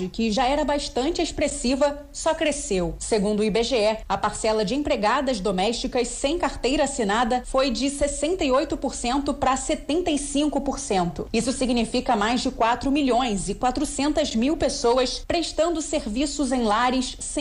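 Throughout, a grainy distortion tracks the audio, roughly 45 dB down. The likely cause is low bit depth without dither: about 9 bits, truncated, so quiet passages turn gritty.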